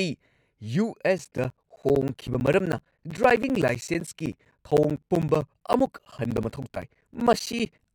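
From 1.18 s to 7.85 s the speech gets periodic USB or driver dropouts: every 64 ms, around 10 ms drops to silence, so you hear a steady ticking under the speech.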